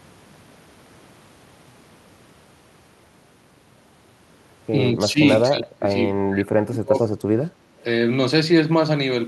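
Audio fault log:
4.93–5.20 s, 5.49–5.91 s and 6.20–6.97 s: speech suppressed in double talk. The speech dips by about 10 dB at first, then by about 30 dB. This is likely an echo canceller muting the near talker while the far side also speaks.
5.29–5.42 s and 6.95–7.06 s: echo leak. A faint copy of the speech returns 197 ms late, about 15 and 20 dB down, likely residual loudspeaker echo the canceller missed.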